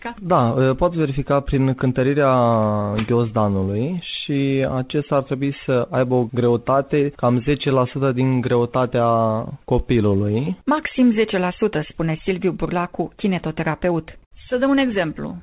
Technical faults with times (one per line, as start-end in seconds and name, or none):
0.00-15.43 clock drift between sender and receiver
0.06-15.27 repeated timing corrections